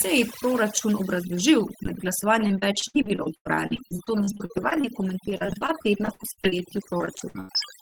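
Overdone noise removal runs throughout: bands near the noise estimate are cut hard, leaving near-silent background with twinkling specks.

Repeated packet loss (robotic sound) hits 2.47–4.85 s after "proračun obrazložil med", then 5.29–6.54 s and 6.98–7.63 s. Frequent dropouts, up to 97 ms, are patched by extending prior sound, so the audio turns choppy and robotic.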